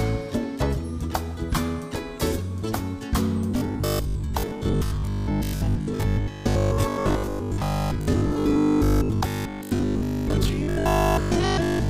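From 3.51 s to the end, robotic sound from repeated short buffers: a rigid 50 Hz buzz, likely from about 20 ms chunks replayed for most of the time.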